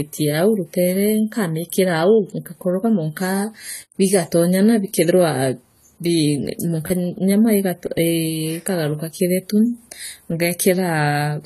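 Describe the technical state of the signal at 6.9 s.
From 6.87 to 6.90 s, new audio failed to arrive in time, so the device replayed its last block three extra times. Each block lasts about 10.7 ms, which fits a 512-sample buffer. The repeated buffer sounds as a brief buzzing stutter with hard joins, and about 30 ms of speech is lost.

Throughout the clip, including this moment, the spectrum stops dead at 14.1 kHz. The top end is dull, and sibilants are smeared and fizzy. This is likely AAC compression at a low bitrate, coarsely quantising the frequency bands and discarding the highest ones.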